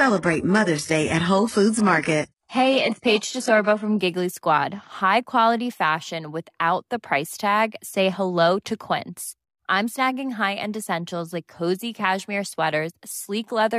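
From 0.0 to 4.0 s the speech plays as an adaptive stream starting at a low bitrate, consistent with roughly 12 kbit/s HE-AAC: treble is synthetic, with nothing above 11.5 kHz, and artefacts are stronger. At 4.0 s quality jumps to a 96 kbit/s AAC-LC stream with no gap, unlike a rebuffering switch.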